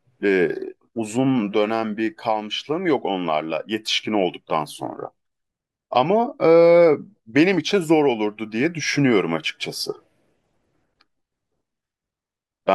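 No technical faults are audible.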